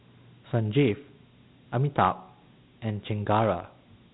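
From start to finish the speech carries Dialogic VOX ADPCM coding, and the damage is plainly audible. Each sample is squeezed into a 4-bit step-size code, so quantisation noise rides on the signal as a gritty hiss that tracks the speech. The band stops at 3.9 kHz, which fits 8,000 samples a second at 32 kbps. A spectrogram shows a hard ceiling with a grainy noise floor filling the space between harmonics.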